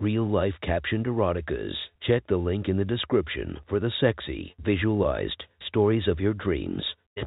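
No faults found in this speech; the audio is simply carried on a G.711 telephone path, so nothing above 4 kHz comes through.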